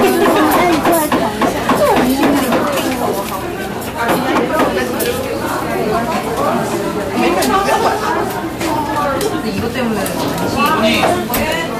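From start to finish, the signal is driven about 8 dB beyond what one stage in the chain can pass, so every peak that exceeds the limit is sliced off flat. This is hard clipping, and it touches only a small share of the waveform, around two percent. The squared-off tops generate harmonics high in the spectrum, heard as brittle crackle and a gritty edge on each loud moment rather than a constant fuzz.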